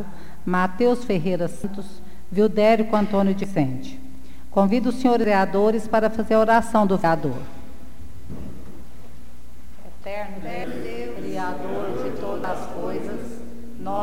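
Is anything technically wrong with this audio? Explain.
Yes, there's audio missing between chunks: at 1.64, 3.44, 5.24, 7.04, 8.84 and 12.44 s the sound skips ahead about a fifth of a second, joined seamlessly, likely from 2-second chunk handoffs dropping material.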